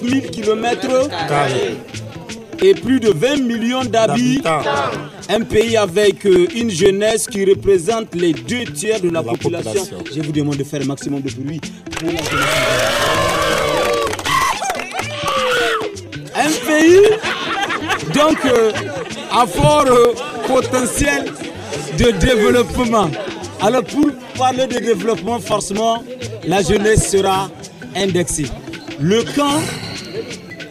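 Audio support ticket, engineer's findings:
Periodic USB or driver dropouts: background task stalling the USB bus or audio driver every 0.249 s, about four times a second, from 0.13 s to 30.5 s. Each stall skips roughly a millisecond of samples, with no silence inserted. Heard as evenly spaced ticks, over a hundred in total, audible only while signal is present.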